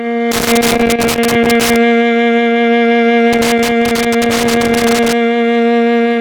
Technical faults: loose connector crackle

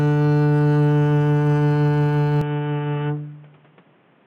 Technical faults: input switched to a poorer device

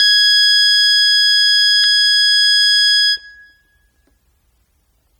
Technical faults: transcoding between lossy codecs; dropped buffer (overrun)

